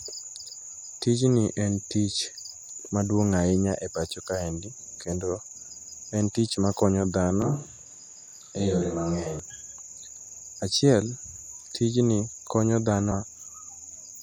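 A speech clip with brief chirps and blips at 2.89, 7.65, 10.40 and 13.11 s, each a tiny squawk. That is damaged data in a compressed stream: corrupted frames make the decoder lose sync and jump to the next valid header. From 7.42 to 9.39 s the voice turns suddenly hollow and roomy, with thinner bass and a faint background of room noise well below the speech, while its overall level barely changes, then snaps back. That abrupt change in and out of room sound is likely a switch to a distant microphone standing in for the close one.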